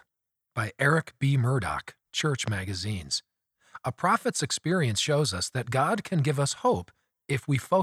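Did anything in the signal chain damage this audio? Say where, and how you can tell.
Yes. A single loud pop at 2.48 to 2.50 s sits about 10 dB above the speech, which continues underneath. It is likely an electrical transient from the analogue wiring or a switch. On the waveform it is a tall, isolated spike; the spectrogram shows a thin vertical broadband stripe.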